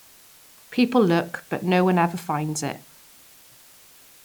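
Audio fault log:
Throughout: low bit depth with dither. A steady, even hiss sits under the speech, roughly 30 dB below it, with no distortion. The level fits 8-bit audio. Dither was added before rounding, so the rounding error became smooth white noise instead of grit.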